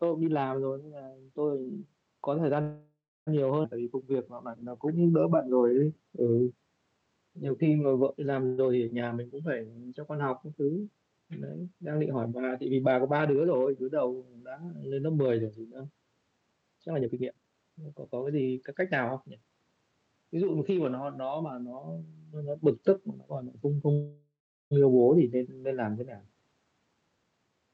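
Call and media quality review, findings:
Call audio freeze, 2.61–3.29 s: sound smears into a fading buzz, then about 0.29 s of silence, then picks up where it left off. Likely packets stalled and the jitter buffer ran dry; receiver stretched the last sound to fill about 0.65 s. Nothing lost, just a gap inserted.

Call audio freeze, 8.46–8.60 s: short buzzy hold of about 0.12 s, no silence. Likely a brief packet delay covered by concealment, and it resumes without loss.

Call audio freeze, 23.93–24.73 s: longer buzz fading to about 0.38 s of silence, about 0.79 s filled in total. Likely the same late-packet starvation as the first one, and resumes intact.

Skip ahead, 3.63–3.66 s: abrupt forward jump, roughly a third of a second of audio gone, with the two sides spliced almost directly. Buffer likely dumped its backlog after the first freeze, or packets dropped in transit.

Jitter buffer slow-down, 3.78–6.17 s: sound drags at about 88% speed with pitch unchanged, with drawn-out sounds. 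Buffer was rebuilding its reserve by repeating pitch periods, about 0.3 s added over the stretch.

Jitter buffer speed-up, 13.26–19.52 s: sound hurried at about 112% speed, pitch unchanged. Buffer was holding more than its target and trimmed short pitch-period chunks repeatedly, roughly 0.7 s cut across the stretch. Opus path underneath, band-limited to 8 kHz.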